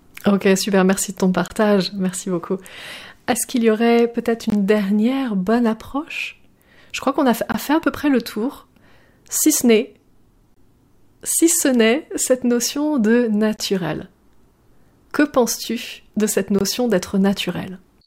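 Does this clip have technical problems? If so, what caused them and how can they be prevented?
Yes. Gaps between chunks appear as hard-edged holes of about 21 ms at 1.48, 4.50, 7.52, 10.54, 13.57 and 16.59 s, one every 3 s. The audio was delivered in 3 s chunks with silence inserted at each join. Prevent this by trimming codec padding and scheduling each chunk seamlessly against the previous one.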